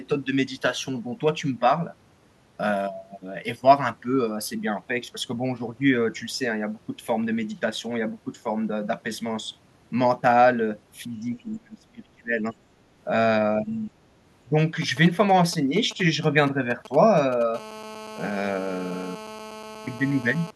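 It's a speech clip with a few problems. From 11.39 to 12.55 s the voice sinks by around 30 dB for about a second in total, and again briefly from 13.91 to 13.97 s by around 20 dB. That's likely speech suppressed in double talk, with the echo canceller ducking the talker while both sides spoke. Between 13.64 and 13.84 s a faint second voice, roughly 30 dB down, slips in, likely the other side's voice leaking through from the loudspeaker past the canceller. From 14.59 to 17.43 s there's a galloping pattern of short 217 Hz buzzes about 15 dB below the speech: GSM signalling bursts from a nearby 2G phone, rectified by the audio circuit. From 17.54 to 20.51 s that turns into a steady, raspy 217 Hz GSM phone buzz, about 16 dB below the speech, which fits the phone being in a call.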